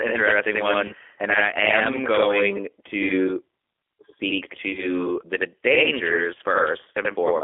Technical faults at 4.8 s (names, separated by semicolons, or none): channel delay (doubling); G.729 codec; VoIP packet loss concealed by the speech codec